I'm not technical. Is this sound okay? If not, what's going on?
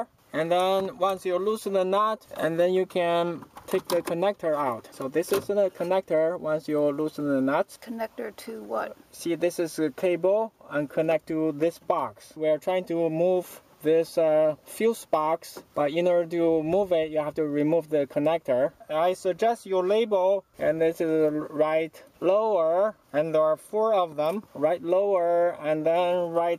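Yes, nothing stood out as a problem when listening to this sound.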